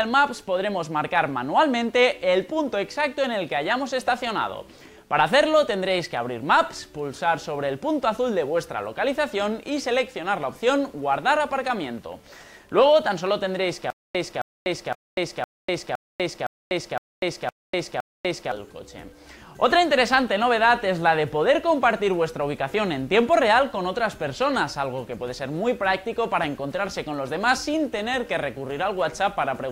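From 13.90 to 18.52 s there's a stutter with silent gaps: a 267 ms burst repeats nine times, each followed by about 245 ms of dead silence, a steady 512 ms cycle. Likely a stalled stream replaying its last fragment, so the sound meant for that stretch is lost.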